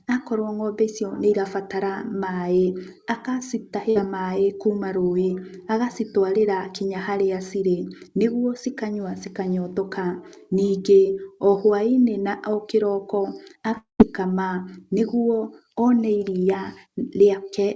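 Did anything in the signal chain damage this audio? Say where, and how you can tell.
Yes. At 3.90 to 3.97 s there is a burst of packet loss in the network stage. The sound stops being new and the receiver stretches what came just before. That concealment lasts about 53 ms as a held buzz or fading hiss. Then the audio picks up further along. About 60 ms of the original is gone. You can tell because the continuation sounds like a copy of the preceding sound, not fresh material. The jump afterwards skips ahead in time.

From 13.77 to 14.01 s the sound freezes into a fading buzz or hiss. That lasts roughly 218 ms in total. About 130 ms of it is near silence before the audio returns. About 220 ms of content never arrives. The likely cause is a long network dropout, where the packets stopped for a stretch. The concealment decays to nothing because no new data reached the receiver. Both gaps sit on a wideband call path with nothing above 8 kHz.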